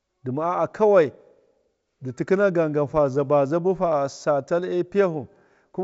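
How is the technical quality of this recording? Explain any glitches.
No glitches to report: the speech comes through G.722 wideband telephone coding at 64 kbit/s, with the band stopping around 7.7 kHz as that path dictates.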